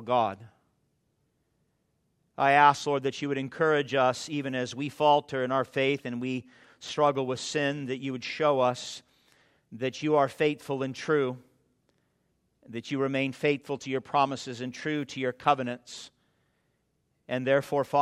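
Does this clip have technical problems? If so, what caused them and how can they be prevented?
Yes, there's one: a single sharp click at 15.10 s, from dropped samples. The waveform jumps straight from one value to a later one, skipping what looks like a single sample, a tiny fraction of a millisecond. That's far too brief to take out any actual sound, so all you get is the tick and a thin vertical line in the spectrum. The likely cause is a momentary hiccup in the capture or transfer path. To prevent it, give the recording chain enough buffer headroom and keep other load off the machine while recording.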